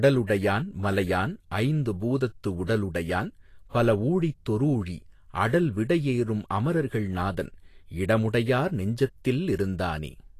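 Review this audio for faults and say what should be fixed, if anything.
Right through the speech, the treble has a hissy, grainy texture and nothing comes through above 14.2 kHz. That's likely Vorbis compression: at a low bitrate, around 36 kbps, fine high-frequency detail gets quantised into noise. Export or stream at a higher Vorbis quality setting to avoid it.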